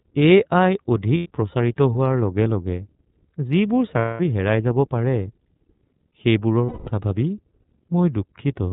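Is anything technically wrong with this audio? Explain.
Yes. The speech is carried by the iLBC codec throughout, and it has lost iLBC frames in three places.

The iLBC codec damage is plainly audible across the whole clip. Nothing above 4 kHz comes through, so the speech is narrowband. It also has a slightly rough, synthetic grain, because each frame's excitation is coded on its own at a low rate, which fits the 13.33 kbps mode with 30 ms frames. That grain is what separates it from a simple telephone band-limit, which would sound dull but clean.

Lost iLBC frames occur at 1.17 to 1.28 s, just before "প্ৰচাৰিত হোৱাৰ লগে লগে", at 3.99 to 4.20 s, just before "হেৰাই যাব পাৰে", and at 6.66 to 6.88 s. About 90 ms goes missing in the first gap, consistent with three 30 ms frames, and about 210 ms in each of the other two. The decoder fills each gap by repeating the last pitch cycle mixed with noise, so you hear a held, faintly buzzy vowel rather than silence. 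That filler is what distinguishes concealment from a plain dropout. Because iLBC frames don't depend on earlier ones, the voice is right again almost at once after each gap.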